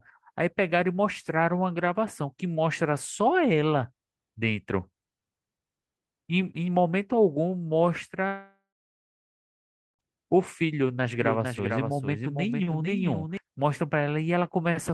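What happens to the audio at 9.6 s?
At 9.6 s the speech is in the middle of a long network dropout, the likely cause of a gap running from 8.27 to 10.01 s. About 1.7 s of audio never arrived. The receiver stretches the last sound into a buzzy tail that fades within a few tenths of a second, leaving roughly 1.35 s of silence. On a waveform this shows as a flat line, and a spectrogram goes blank after a brief smeared, decaying band. Speech resumes at 10.01 s, with the lost stretch simply gone.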